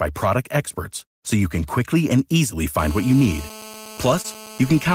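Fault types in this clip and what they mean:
GSM phone buzz: a nearby 2G phone on a call, its 217 Hz transmit bursts rectified into the audio, giving a hard raspy buzz at about 18 dB below the speech from 2.79 s, after "can quickly and easily". Unlike mains hum, it is harsh and harmonic-rich, not a smooth low tone.
Short concealed packet loss: about 20 ms of the call arrived too late, and the receiver filled it by extending the preceding sound, heard as a brief smear near 4.21 s. Unlike a dropout, there is no silent gap.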